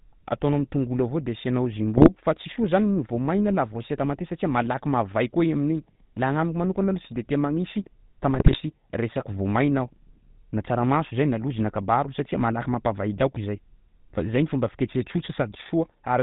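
The speech passes throughout through the GSM full-rate codec, which fits a 13 kbps full-rate coder. It rebuilds the voice from a vocal-tract filter driven by sparse regular pulses and cuts everything above 4 kHz, leaving a plainly buzzy, gravelly roughness with no top end.

From 1.97 to 2.09 s, between "am'tongolo avao de asianao" and "fa tsy soa", GSM bit errors corrupt the decoder's filter, pitch and gain values across what fits about six frames, so the voice breaks into a brief squawk and gargle. A second, longer burst from 8.34 to 8.58 s, right after "tia magnisy", points to roughly eleven damaged frames and a higher error rate, producing pops and gargling.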